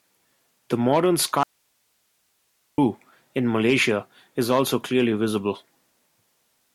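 Speech cuts out abruptly at 1.43 s and returns at 2.78 s. That is an audio dropout to a faint residue lasting about 1.35 s. Only hiss remains, roughly 45 dB below the speech. The likely cause is a lost signal feeding a still-live path.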